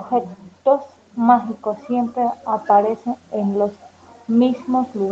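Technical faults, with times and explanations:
0.63–5.11 s, automatic gain rising: gain control judged the input too quiet and lifted it steadily, swelling speech and background together, so the waveform envelope gradually widens.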